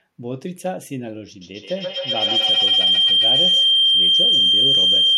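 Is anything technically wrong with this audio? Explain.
Yes, there's a feedback howl from 1.41 s to the end: two devices in one room are looping mic to speaker, building a shrill tone around 3 kHz, with the loop repeating roughly every 150 ms, peaking about 12 dB over the speech.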